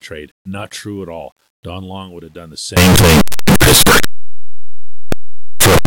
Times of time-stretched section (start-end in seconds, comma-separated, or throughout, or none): none